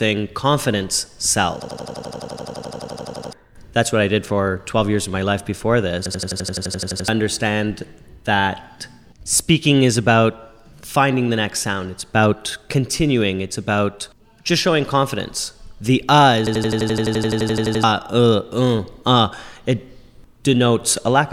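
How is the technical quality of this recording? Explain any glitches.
Not great. There are three system hang loops, at 1.62 to 3.33 s, 6.06 to 7.08 s and 16.47 to 17.84 s. Each time the system froze while the hardware kept replaying one 85 ms chunk, which fits a 4096-sample buffer. You get a machine-gun stutter at about 11.7 Hz, and roughly a second or more of real audio goes missing each time.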